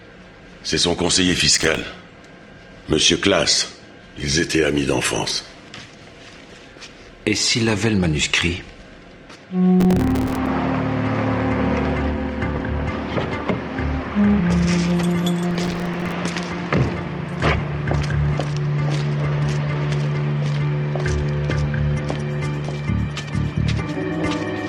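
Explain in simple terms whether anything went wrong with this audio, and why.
Processor overload crackle breaks in three times, at 1.55–1.82 s, 9.80–10.47 s and 15.51–16.12 s. Dozens of tiny silent gaps, each a few milliseconds long, fall in quick succession as the computer misses its deadlines. That makes a gritty crackle rather than one clean dropout.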